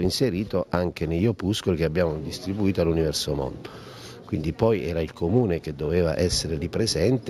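Throughout the clip there is imaging from linear upsampling, which fits a straight-line conversion from 16 kHz to 48 kHz. The top of the original band is dulled, and a mirrored copy sits between 8 and 16 kHz, roughly 25 dB down. That residue gives a light metallic shimmer on bright sound, unlike a clean low-pass, which would only dull.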